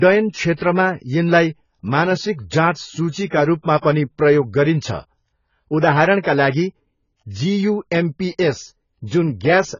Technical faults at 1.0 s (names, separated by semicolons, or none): AAC compression